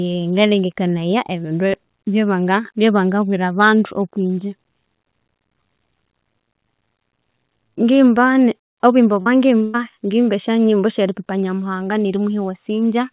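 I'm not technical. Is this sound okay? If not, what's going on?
No. At 9.22 to 9.28 s there is a short concealed packet loss: about 40 ms of the call arrived too late, so the receiver repeated the preceding sound to cover the hole. You hear a brief smear or wobble before the speech carries on normally.

At 9.64 to 9.76 s comes a burst of packet loss: roughly 100 ms went missing in a row. The receiver stretched the last sound and faded it, giving a held buzz or hiss. That stretch of speech is gone, and the audio picks up again at "ngimba esya".

The call itself runs over a phone-style link, so nothing above 4 kHz comes through and the sound is somewhat muffled.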